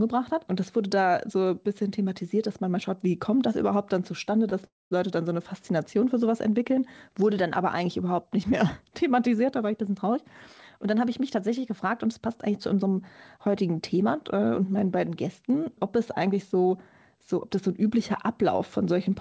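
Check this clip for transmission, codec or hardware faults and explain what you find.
Two transmission faults are audible, both from the receiving end of a call. The audio also stops sharply at 8 kHz, which points to a wideband call codec.

Call audio freeze, 4.65 to 4.93 s. The last sound briefly carries on, fades, then goes silent for about 210 ms. Packets were likely held up, draining the jitter buffer. The audio then resumes where it stopped. About 256 ms of delay is added and nothing is lost.

Jitter buffer speed-up, 10.77 to 13.71 s and 15.96 to 17.13 s. The buffer held too much audio. The receiver cut many tiny pitch-length pieces to catch up. The first stretch runs 6% fast, losing roughly a fifth of a second. The second runs 4% fast, losing about a twentieth. Pitch stays the same, but the first stretch feels hurried.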